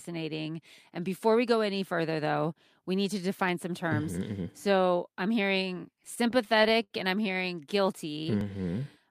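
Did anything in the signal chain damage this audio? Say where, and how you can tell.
Yes. At 3.49 s and again at 8.41 s there is a brief jump where the speech skips forward instead of flowing on, with no silence in between. Each skip is only a few milliseconds long. This is a dropped buffer (overrun), most likely in the driver or buffer stage: the capture software was late collecting a block of samples, the hardware overwrote it, and the audio on either side was butted together, leaving a discontinuity.

From 6.05 s to 6.92 s the speech drags and stutters, with repeated little hitches as the last sound is held and extended. These are repeated stalls (stutter) at the network stage. Packets arrived late several times in a row, so the jitter buffer ran dry seven times. The receiver filled 132 ms in total, about 15% of that stretch and up to 70 ms in the longest gap, by continuing the previous sound. 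Nothing was actually lost.

Between 8.13 s and 8.85 s the speech slows to about 89% of its normal pace while the pitch stays the same, so sounds are drawn out. This is a jitter buffer slow-down. With its reserve running low, the receiver repeated individual pitch periods and fragments of pauses to stretch playback, adding about 90 ms to rebuild its cushion. The second overrun at 8.41 s falls inside this stretch.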